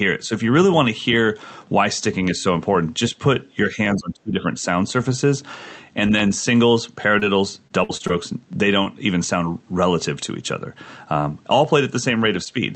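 A click recurs every 0.78 s from 0.74 s to 12.42 s, about fifteen times in all. The likely cause is clock drift buffer slips: two devices running at rates about a thousandth apart, so the buffer periodically drops or repeats a few dozen samples.

Between 3.71 s and 4.57 s the speech sinks and thins in patches, dropping by as much as about 25 dB over roughly three quarters of a second. This is likely speech suppressed in double talk. The echo canceller, faced with both sides talking, mistook the talker for loudspeaker echo and turned it down.

At 7.19 to 7.23 s a brief smear replaces the sound. This is short concealed packet loss: 20 ms of audio never arrived, and the decoder bridged the hole by extending the preceding sound before blending back.

From 7.67 s to 8.11 s the speech turns choppy and robotic, with pieces missing. This is repeated packet loss. Four separate gaps, the longest 53 ms, were each patched by extrapolation, so nearly a third of that stretch is synthetic fill rather than real signal.

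A second short concealed packet loss at 8.83 to 8.87 s gives another quick smear where 20 ms was filled in. Throughout, the Opus call path caps the sound at about 8 kHz.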